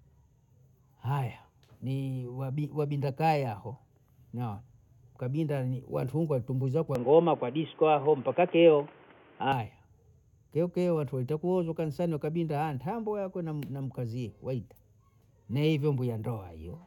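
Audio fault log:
6.95–9.52 s: input switched to a poorer device, likely a headset call profile, after "ni watungwa tumbwe"; nothing above 3.5 kHz, so speech turns dull and boxy, level shifts about 5 dB, new background noise about 30 dB below the speech.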